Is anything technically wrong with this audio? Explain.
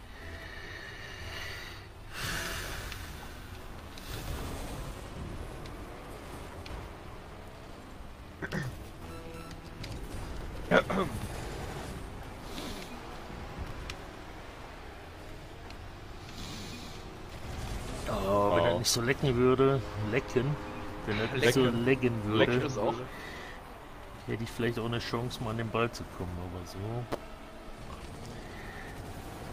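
No, nothing technically wrong turns up anywhere in this audio.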